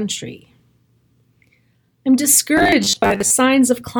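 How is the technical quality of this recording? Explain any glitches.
One glitch affects this speech recording. From 2.57 to 3.30 s the voice collapses into robotic sound from repeated short buffers: a rigid, metallic 100 Hz buzz that only loosely tracks the speech. This is likely caused by audio arriving too slowly, so roughly half the time is filled by looping the last 10 ms block while real audio is skipped.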